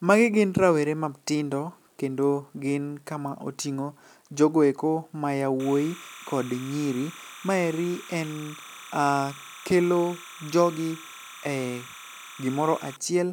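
A speech recording with timecode bleed from 5.60 s to 12.96 s: a steady chirping warble near 1 and 2 kHz sits roughly 20 dB below the voice. Linear timecode from an adjacent track or cable is leaking in, and its rhythm fits 29.97 fps code.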